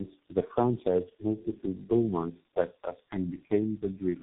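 From start to finish the speech carries tandem speech coding: it sounds like three low-rate speech codecs in a row, the last likely a G.723.1-type coder, each re-encoding its predecessor's already damaged output. The errors stack, so the speech is rough, muffled and warbly throughout. A spectrogram shows a hard ceiling at the top of the telephone band, smeared, blotchy harmonics and patchy gaps between formants, while the waveform looks coarse and unevenly shaped.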